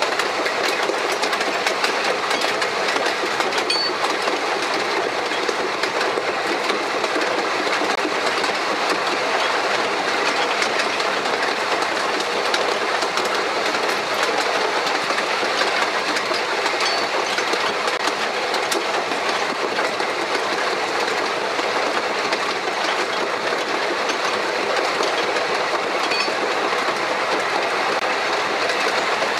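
The audio has a gap between chunks three times, 20 ms of silence at 7.95–7.97 s, 17.97–17.99 s and 27.99–28.01 s, exactly 10 s apart. Unlike a dropout, nothing is missing; the sound pauses at each chunk join, from codec padding or late chunk playback.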